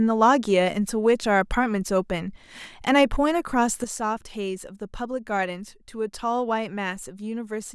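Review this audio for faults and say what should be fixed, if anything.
At 3.84 s there's a sudden gain jump: the speech and background both drop about 8 dB together and stay down, likely from a gain change applied without a ramp. Ramp gain changes over a few milliseconds.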